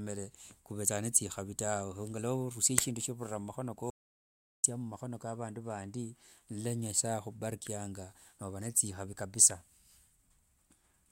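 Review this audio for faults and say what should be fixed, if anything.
An audio dropout to silence runs from 3.90 to 4.64 s, cutting the speech off for 0.74 s with no room tone; the waveform goes flat, and the spectrogram shows a blank band. It was likely caused by a lost input link or a brief mute, and securing connections and monitoring input levels during recording would prevent it.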